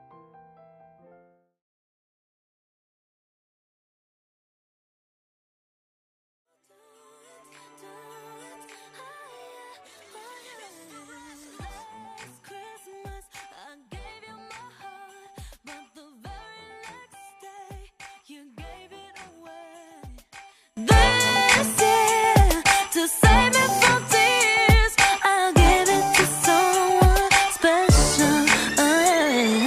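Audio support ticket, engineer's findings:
0.0–20.77 s: mono sum down about 26 dB, faint residue left. One channel inverted, likely; shared content cancels. Unlike a dropout, the inter-channel difference survives.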